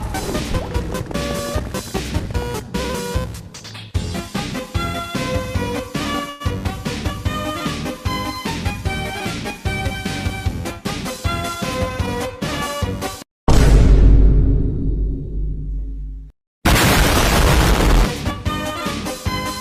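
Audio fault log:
6.29 to 6.42 s, call audio freeze: the sound stalls and the last bit gets stretched into a short fading buzz for about 108 ms, then picks up right where it left off. Nothing's lost, just a gap pushed in, likely from late packets draining the jitter buffer.
11.10 to 11.98 s, jitter buffer speed-up: the audio runs about 7% faster with the pitch unchanged, so it sounds a touch rushed. The receiver is trimming tiny pitch-period slices back to back, around 70 ms in all, to shrink an oversized buffer.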